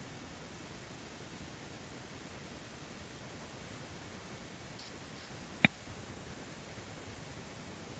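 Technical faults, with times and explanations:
0.00–6.12 s, echo leak: a fainter copy of the speech trails the original by 370 ms at roughly 10 dB lower, likely far-end loudspeaker pickup that an echo canceller failed to remove. On a spectrogram, the speech's harmonic pattern reappears weaker, 370 ms later.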